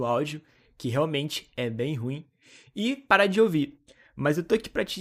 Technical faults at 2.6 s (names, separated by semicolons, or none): none